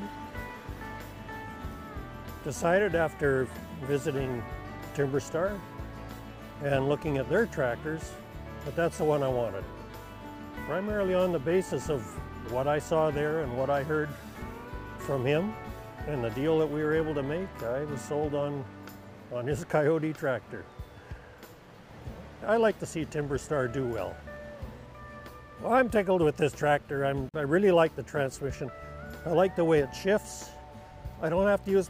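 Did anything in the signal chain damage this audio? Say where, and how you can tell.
Yes: a gap at a join of encoded pieces, from 27.29 to 27.34 s. This is a codec-stage fault. The sound stops for about 47 ms and then carries on from where it left off, with nothing lost from the material. That points to two separately encoded segments spliced together without trimming. The encoder's start-up delay and the padding in the last frame of the earlier piece both remain, so they open a silent hole whose edges the codec blurs.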